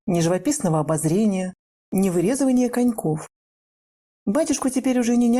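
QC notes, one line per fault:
No faults found on the QC pass.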